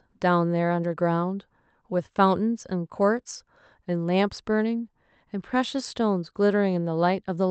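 No technical faults can be heard in this speech recording; it carries the ordinary character of a call connection, with the top end stopping at about 8 kHz, which fits an Opus stream running at around 32 kbps.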